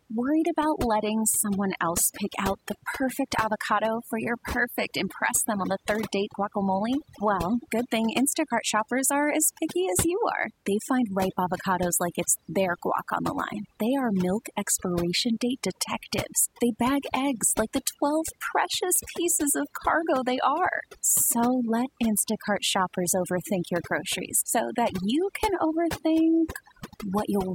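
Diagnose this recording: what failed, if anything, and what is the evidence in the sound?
Overdone noise removal in the processing chain runs the whole way through. Bands near the noise floor get gated out, leaving near-silent gaps with twinkly specks.

Faint regular ticks run from 0.54 to 27.49 s, about every half second, roughly seventy in all. The likely cause is clock slip clicks between unsynchronised converter clocks, around 50 ppm apart, slipping one sample each time.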